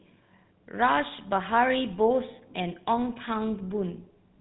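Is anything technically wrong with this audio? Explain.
Yes, the whole speech clip runs through GSM full-rate codec damage. It models the vocal tract and excites it with a regular pulse train, keeping only a third of the excitation, and nothing above 4 kHz survives. The result is a plainly audible buzzy, gravelly roughness, which fits the old 13 kbps phone codec.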